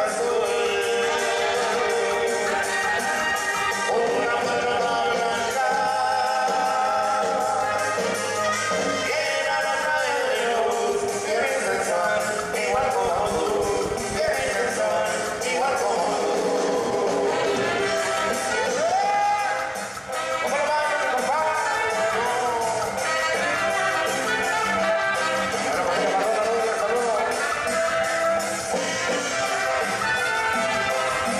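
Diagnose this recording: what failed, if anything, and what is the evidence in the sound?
A train of clicks runs from 12.74 to 14.49 s. About thirty similar pulses arrive at an uneven pace, near 16.7 per second. They peak roughly as loud as the audio itself. The likely cause is interference pickup in the analogue wiring.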